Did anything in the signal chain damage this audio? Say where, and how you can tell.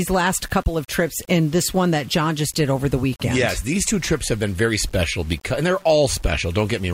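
Yes. Throughout the speech a grainy, gritty distortion rides on the signal and moves with it, roughest on quiet syllables and decaying tails. This is likely low bit depth without dither at the sample-format conversion stage: rounding to about 7 bits leaves error only about 30 dB below the signal.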